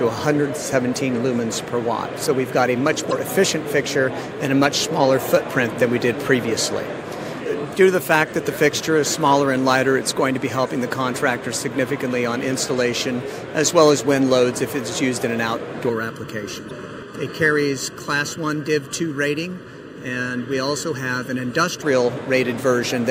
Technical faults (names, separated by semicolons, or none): damaged data in a compressed stream; channel delay (comb filtering)